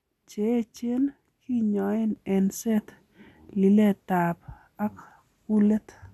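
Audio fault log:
2.16 s to end, sudden gain jump: at 2.16 s the speech steps up by about 6 dB in one sample and holds that level to the end of the clip, with the background noise rising along with it. This is likely a digital gain setting applied without a ramp. The whole signal is scaled at once, so everything steps up together. On a waveform the envelope roughly doubles at that instant. On a spectrogram every frequency brightens along one sharp vertical boundary.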